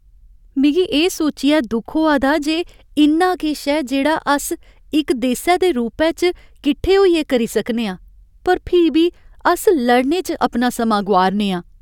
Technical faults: none

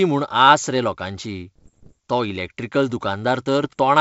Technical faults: bit errors on an ADPCM link

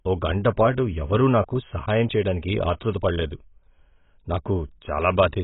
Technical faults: AAC compression

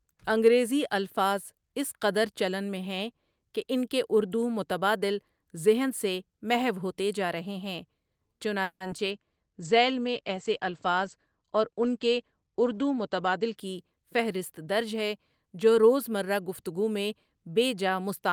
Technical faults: call audio freeze; short concealed packet loss; call bitrate drop; jitter buffer speed-up

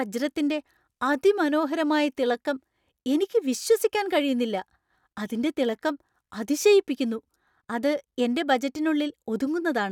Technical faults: none

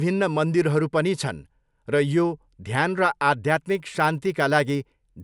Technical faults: resampler restarted on every block

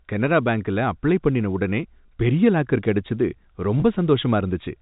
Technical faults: packet loss with pitch repetition

